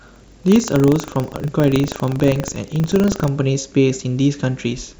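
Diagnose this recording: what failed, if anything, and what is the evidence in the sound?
Buffer tearing at the driver or buffer stage. From 0.00 to 3.28 s the speech carries a robotic 25 Hz rattle, a hard splice every 40 ms where a small sliver of audio from about 150 ms earlier gets replayed because the writer and reader keep crossing.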